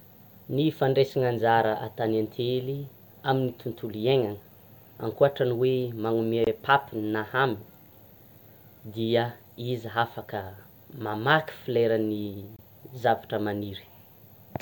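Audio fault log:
6.44–6.47 s and 12.56–12.59 s, gap at a join of encoded pieces: the speech breaks for about 25 ms each time, then picks up exactly where it left off, with nothing missing. That fits separately encoded segments joined untrimmed, so encoder start-up delay and last-frame padding survive as silence. Unlike a packet dropout, there is no concealment smear or repeated fragment, only a break whose edges the codec smears.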